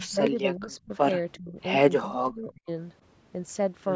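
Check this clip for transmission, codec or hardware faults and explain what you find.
Two kinds of fault are audible, both pointing to an echo canceller under strain during a call.

Speech suppressed in double talk occurs from 0.00 to 0.92 s, 1.38 to 1.59 s and 1.99 to 2.69 s. The speech sinks by up to about 20, 25 and 30 dB in turn, likely because the canceller turned this talker down while the far side was also speaking.

Echo leak appears from 0.72 to 0.76 s. A faint scrap of the voice returns 363 ms late at about 30 dB below the speech, likely loudspeaker sound the canceller failed to remove. Its fixed delay and brief character separate it from room reverberation, which would trail off smoothly.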